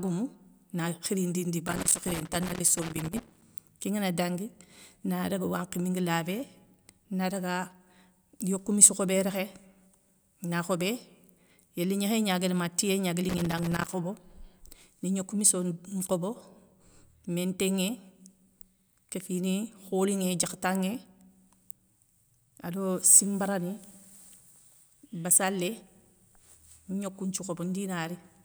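An irregular burst of scratchy crackle runs from 1.68 to 3.45 s in this speech, and a shorter one follows "ma tiyé gnaga li" at 13.29 to 13.94 s. This is loose connector crackle: a worn or dirty contact chopping the signal as it shifts.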